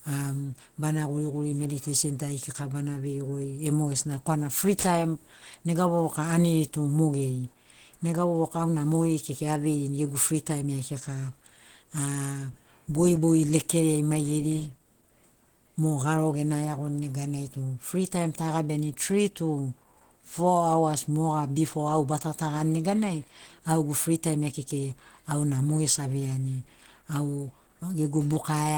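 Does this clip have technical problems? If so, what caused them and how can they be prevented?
Yes. The speech sounds hoarse and muffled throughout, likely from Opus compression in hybrid mode at a low bitrate around 16 kbps. Content extends up to 20.1 kHz without MP3-style swirling holes. Encoding at a higher bitrate prevents this.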